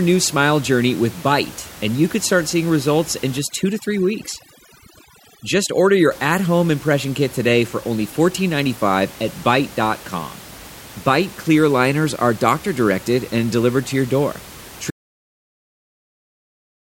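A speech recording with two faults. From 3.39 s to 6.11 s, between "start seeing results in" and "at home impression kit", overdone noise removal makes the room noise, about 20 dB below the speech, drop and break up into twinkling specks. On a spectrogram the background shows scattered isolated dots and holes punched into the quieter parts of the speech. At 14.91 s, right after "delivered to your door", an audio dropout to silence runs to the end. The waveform goes flat with no room tone, likely because the input was lost while recording carried on writing silence.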